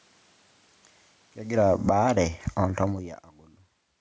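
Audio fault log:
1.43–3.96 s, automatic gain falling. The gain control judged the input too loud and pulled its gain down slowly, by about 14 dB overall. Speech and room noise sink together across these seconds. The talker's own movements near 1.5 s and 3.0 s add to the level changes.
1.98–2.51 s, automatic gain rising. The input here dropped by about 24 dB, so the gain control pushed its gain back up by about 6 dB. Speech and background swell together over half a second. This is a gradual climb, not a sudden step.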